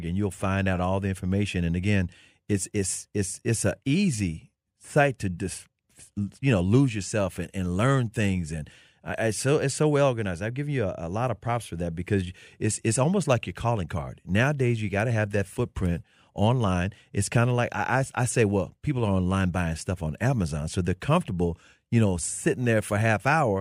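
No technical faults can be heard anywhere in this speech recording. There is nothing here that needs a timestamp or an explanation.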